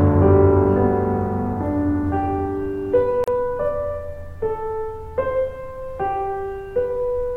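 At 3.24 s the music drops out, and it resumes at 3.28 s. This is a gap at a join of encoded pieces, lasting about 36 ms. Two separately encoded sections were butted together without trimming. The encoder's start-up delay and the padding of the last frame both survived as silence. The edges are smeared by the codec. After the hole, the music continues exactly where it left off.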